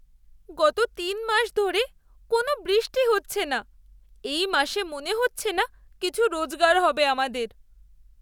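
No technical faults are audible.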